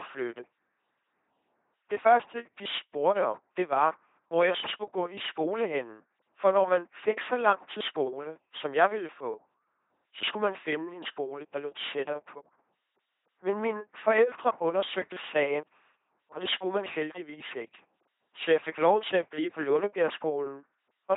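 Speech runs through an LPC-10 vocoder from start to finish, and the damage is heavy. The voice comes out buzzy and mechanical, like a robot. Each instant is rebuilt from either a pulse train or noise, never a mix. Where that voiced-or-unvoiced choice goes wrong, buzz or hiss appears. Nothing remains above 3.8 kHz. The harsh, coarse sound fits the codec's very low 2.4 kbit/s rate.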